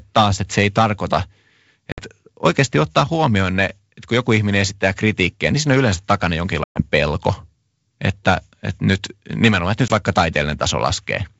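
Packet loss on an ADPCM call cuts hard-edged silent holes at 1.92–2.02 s, 6.64–6.81 s and 9.88–9.91 s, the middle one longest. The decoder's predictor and step size lose step with the sender's, so speech resumes with brief distortion.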